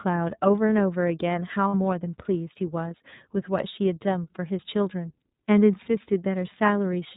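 iLBC codec, throughout the speech: the audio passes through this narrowband VoIP codec, so nothing above 4 kHz survives and the voice has a plainly audible rough, synthetic edge. Each frame's excitation is coded on its own, with damage consistent with 13.3 kbps and 30 ms frames.

Lost iLBC frames, from 1.68 to 1.74 s: roughly 60 ms of packets, which fits two 30 ms frames, never arrive. The decoder repeats the last pitch cycle blended with noise, producing a brief buzzy, held vowel-like sound. Normal speech returns immediately afterward because each iLBC frame decodes independently.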